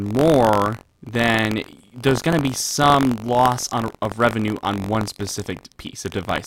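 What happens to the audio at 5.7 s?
At 5.7 s the speech carries buffer tearing, which runs through the whole clip rather than starting there. The write and read positions in the ring buffer have slipped and cross inside each period. A small slice of every buffer, around 3 percent, holds audio from roughly 70 ms earlier, with hard joins on both sides. The result is a robotic buzz at 46.9 Hz, which fits a 1024-sample buffer. It sounds only while speech is present.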